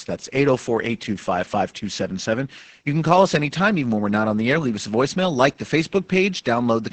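From start to finish the speech carries Opus voice compression damage, and it is heavy. Nothing reaches above 8.7 kHz, so the top of the spectrum is gone and consonants lose their crispness. The linear-prediction coder is rendering the excitation coarsely, which leaves the speech muffled, hoarse and faintly robotic throughout. That combination of a wideband limit with this degree of excitation smearing fits a SILK-mode stream at around 10 kbps.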